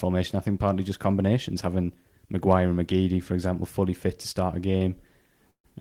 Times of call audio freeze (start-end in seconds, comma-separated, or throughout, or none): 5.51-5.66